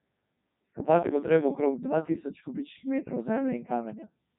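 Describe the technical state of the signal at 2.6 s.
At 2.6 s the speech carries Codec 2 vocoder damage, as it does throughout. Rebuilt from sine waves, it sounds robotic and buzzy, nothing above 3.8 kHz, fitting the 3.2 kbit/s mode.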